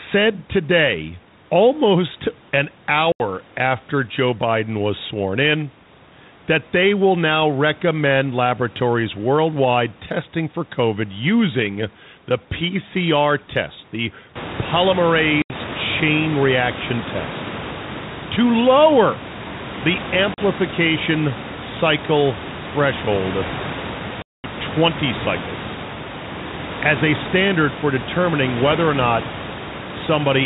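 There's packet loss on an ADPCM call at 3.12 s after "today almost an", at 15.42 s before "chain reaction test", at 20.34 s after "to lower the", and at 24.22 s. You get hard-edged silent holes of about 80, 80, 40 and 220 ms. Then the decoder's predictor and step size are out of sync, so the sound comes back with some distortion before it settles.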